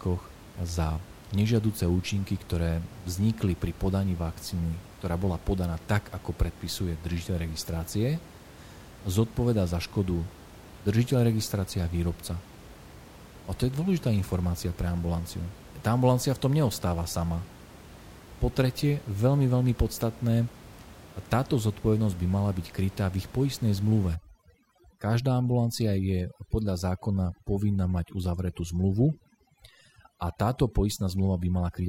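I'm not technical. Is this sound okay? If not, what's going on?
No. From 24.15 s to the end, there is overdone noise removal. A cleanup tool set too strongly erases faint sound along with background noise, so the pauses go near-silent with twinkling specks.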